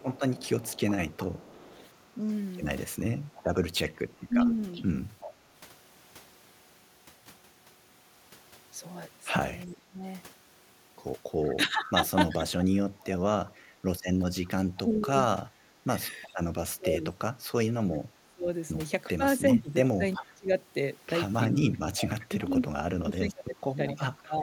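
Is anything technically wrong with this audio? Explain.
Yes. Two call-path problems recur through this speech.

Echo leak appears from 0.0 to 5.33 s, 11.85 to 16.29 s, 19.54 to 20.23 s and 21.75 to 22.46 s: a copy of the speech trailing by 375 ms, about 20 dB down at first, rising to about 10 dB below in the last two. The likely cause is a far-end echo canceller passing loudspeaker pickup back.

Speech suppressed in double talk occurs at 4.28 to 4.35 s, 9.65 to 12.87 s, and 14.48 s to the end. With both sides talking at once, the speech dips and breaks up, by as much as about 25 dB, likely as the canceller ducks its own talker along with the echo.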